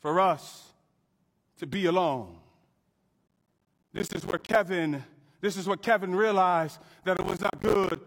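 At 3.28 s the speech picks up processor overload crackle that lasts until 4.56 s, then comes back from 7.17 to 7.96 s. The machine is falling behind on short audio buffers of around 10 ms, missing dozens of deadlines over a short stretch. Each miss drops a small slice of silence with hard edges into the sound, so you hear a gritty, tearing crackle over the speech that stops once the load eases.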